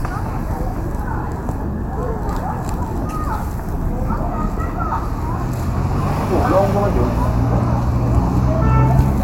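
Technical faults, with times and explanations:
No technical faults detected anywhere in the audio.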